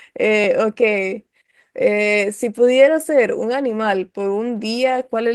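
At 0.44 s there's a tiny underrun with held sample: the output buffer ran dry for about 0.67 ms, roughly what a 32-sample gap would give, and the converter froze on its last value. Playback resumed right where it left off, so it's only a faint tick in the speech, sitting over the light Opus voice coding.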